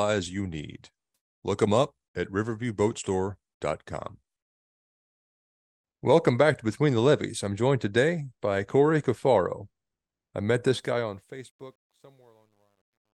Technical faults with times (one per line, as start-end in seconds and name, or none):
10.69-13.19 truncation distortion on a fade